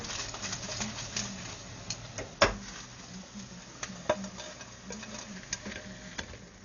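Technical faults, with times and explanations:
Throughout, Dolby Digital compression: the damage is likely from an AC-3 style encoder starved of bits, consistent with roughly 48 kbps. It cut the band so nothing survives above 6.9 kHz, and left many frequency lines with no detail bits, which the decoder filled with dither noise. The sound is dull and muffled, and the damage is heavy: a rough, fluttering noise clings around tonal parts of the sound.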